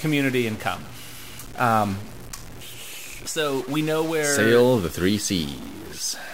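Harsh, buzzy distortion runs through the whole speech clip, and pauses fill with steady noise. A stuck bit is the likely cause, adding errors of roughly -35 dBFS.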